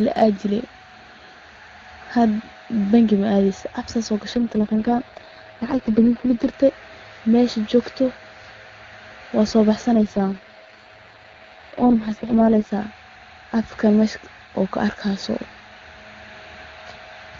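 From 4.35 to 6.54 s the speech turns rough and synthetic, then recovers. This is an AMR rate drop: on a weak radio link the network told the AMR-WB codec to code at a much lower rate and use the freed bits for error protection. The sound points to a fall from about 23.85 to 6.6 kbit/s. The bandwidth holds and there is no gap. The same raspy degradation returns just after "waa soo", from 9.95 to 12.71 s, before the clearer HD Voice quality resumes.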